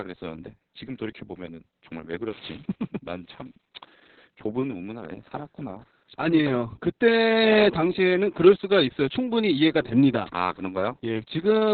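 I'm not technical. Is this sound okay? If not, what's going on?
No. The whole clip, start to finish, has heavy Opus voice compression damage. The speech was squeezed hard to save data, so the codec dropped everything above about 4.4 kHz, leaving a narrow, telephone-like sound. It also rebuilt the voice from a rough model instead of keeping the real detail. That makes the speech muffled and a little hoarse, with a faintly robotic edge. None of it comes back without the original recording.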